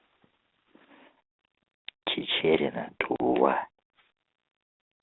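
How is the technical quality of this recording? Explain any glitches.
There is one glitch, on a narrowband telephone line coded as G.726 ADPCM at 32 kbit/s and passing roughly 250 Hz to 3.7 kHz. From 3.16 to 3.21 s, packet loss on the ADPCM call leaves a hard-edged 40 ms silent gap, about two packets' worth. During the gap the decoder's adaptive predictor and step size drift away from the sender's. Speech then resumes with brief, slight distortion. It settles again within some tens of milliseconds.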